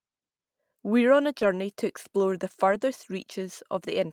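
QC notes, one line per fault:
1.39–1.43 s, short concealed packet loss: About 20 ms of the call arrived too late for the decoder, just after "on a" and before "to explore the". The receiver covered the hole by extending the sound that came before it, continuing its pitch where it was voiced or filling with shaped noise where it wasn't, for about 17 ms, then crossfaded back into the real signal. The result is a brief smear or wobble instead of a gap.
1.41–1.43 s and 2.71–2.73 s, lost packet rebuilt from error correction: Each time, one 20 ms packet went missing, but the following packet carried a low-bitrate backup copy of it, the in-band forward error correction that Opus provides. The decoder played that copy, so there is no silence. The first falls between "on a" and "to explore the", overlapping the concealed loss. The second comes just after "to explore the". Because each copy was coded at a much lower rate, those 20 ms sound rougher and noisier than the surrounding audio.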